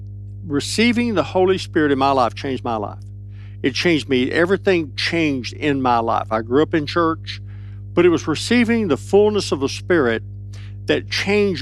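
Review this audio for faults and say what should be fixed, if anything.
Mains hum runs through the whole speech clip. It is a steady low tone at 50 Hz, sitting about 15 dB below the speech. A ground loop or nearby transformer is feeding power-line current into the signal. To prevent it, break the ground loop with balanced cabling or an isolator, and keep gear away from transformers.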